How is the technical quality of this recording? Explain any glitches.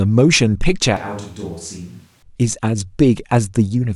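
The recording has one clear fault. From 0.97 to 2.23 s, the speech turns suddenly hollow, roomy and thin, roughly 10 dB quieter. The likely cause is a switch to a distant microphone.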